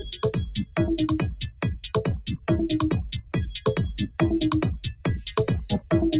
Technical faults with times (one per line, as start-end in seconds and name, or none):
0.00-6.19 noise suppressor applied to music or sounds
1.41-1.88 sound cut by the noise suppressor
2.18-2.47 sound cut by the noise suppressor
3.18-3.33 sound cut by the noise suppressor
4.83-5.30 sound cut by the noise suppressor